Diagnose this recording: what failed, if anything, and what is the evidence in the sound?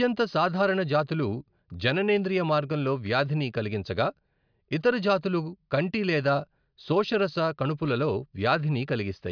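Nothing here points to a failure at any stage of the chain; the speech recording holds steady throughout, with no moment that gives an engineer anything to chase.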